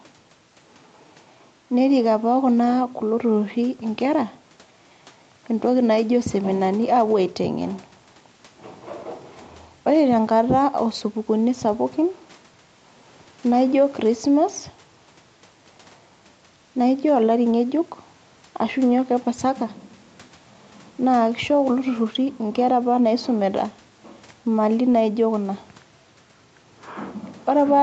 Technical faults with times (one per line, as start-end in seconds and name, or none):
none